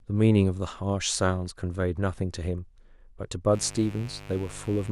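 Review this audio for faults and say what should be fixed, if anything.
Mains buzz from 3.51 s to the end at 4.92 s: a steady, raspy buzz at roughly 20 dB below the speech. Sharp switching spikes, twice per 50 Hz cycle, leak in through a dimmer, rectifier or missing shield, spreading harmonics well into the kilohertz range. To prevent it, keep dimmers and switching supplies away from the signal chain and use properly shielded, grounded cabling.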